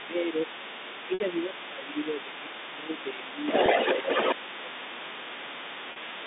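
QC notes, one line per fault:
0.00–0.12 s and 0.29 s to the end, other side's voice leaking through: A second voice runs underneath the talker. It is brief and fairly faint at the start, about 15 dB down, then returns at 0.29 s and stays to the end at about 5 dB below the main speech, almost level with it. The likely cause is a loudspeaker at the talker's end whose echo the canceller did not fully strip from the microphone signal, so the far side is sent back to itself.
0.07–0.41 s, 0.76–3.46 s, 3.95–4.09 s and 4.34 s to the end, speech suppressed in double talk: The talker's voice sags by up to about 10 dB, dulls and breaks up in pieces. This happens for roughly two seconds in the long middle stretch, about a second and a half near the end, and only briefly in the two short spans. These dips line up with the leaking far-side voice. Both sides are likely talking at once, and the echo canceller, unable to separate them, turns everything down.
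1.14 s, 3.66 s and 5.92 s, packet loss with pitch repetition: The sound briefly freezes into a held, buzzy tone before speech resumes. The gaps are 60 ms, 20 ms and 40 ms long, which fits losses of three, one and two 20 ms packets. The receiver fills each hole by repeating the last pitch period and fading it, so the short gap sounds like a slight stutter. The 60 ms one is long enough to audibly fade before the speech cross-fades back in over the narrow telephone band.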